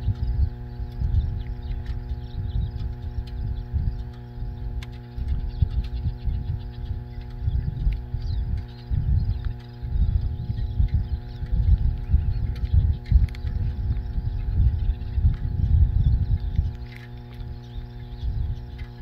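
From the first second to the last, a steady mains hum sits under the audio as a fixed low tone at 60 Hz, only about 15 dB below the signal and clearly audible. Power-line current is leaking into the signal path, most plausibly through a ground loop or a nearby transformer. A spectrogram would show an unbroken horizontal line at 60 Hz across the whole clip, and the waveform would show a persistent sine ripple that thickens the trace even in pauses.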